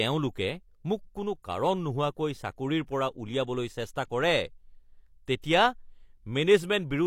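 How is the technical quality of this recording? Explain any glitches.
The recording has one glitch: a pre-echo at 5.42 to 5.44 s. The transform codec spreads its quantisation noise across a whole block, so a sharp attack near the block's end pushes that noise into the quiet moment before it. The result is about 20 ms of short hiss just ahead of the onset, and an attack that sounds softened and smeared.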